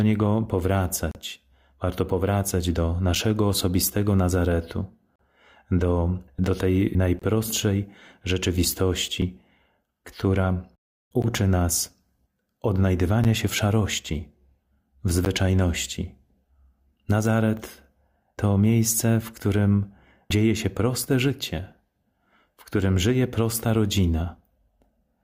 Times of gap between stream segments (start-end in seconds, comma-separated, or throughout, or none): 1.11-1.15, 3.15, 5.16-5.19, 7.19-7.22, 9.22, 11.22, 13.24, 15.25